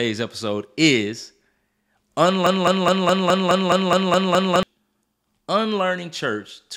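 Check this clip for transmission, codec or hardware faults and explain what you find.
One fault turns up: a broken-record loop in the speech from 2.46 to 4.63 s. Over that span a fragment about 0.21 s long plays ten times in a row, identically each time, giving a rapid stuttering chatter until normal audio resumes at 4.63 s. Whatever should have been heard during those two seconds never arrives. The likely cause is a stall in the player, encoder or stream, which kept resending the last short fragment it still held.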